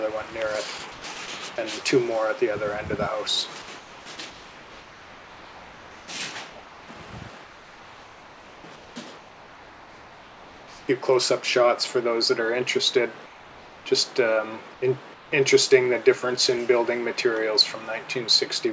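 From 0.78 to 1.28 s the sound gets chopped by the voice detector. The sender likely flipped between sending and muting a few times, so about 180 ms of quiet edges drop into synthetic fill.

Then comfort noise in place of the background, likely from discontinuous transmission, at 3.78–6.08, 7.44–10.88, 13.26–13.86, 14.74–14.82 and 15.14–15.32 s. The real background is swapped for smoother synthetic noise, about 3 to 4 dB quieter in the later gaps, all capped at 8 kHz by the call codec.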